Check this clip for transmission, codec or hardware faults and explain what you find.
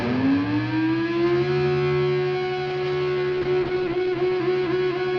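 One fault is audible: a call bitrate drop from 2.71 s to the end, with the lowest quality lasting about 1.2 s. The call's bandwidth estimate fell and the encoder switched to much coarser coding, consistent with a drop from roughly 48 kbps to 13 kbps. This strips the high frequencies and leaves the sound muffled and rough.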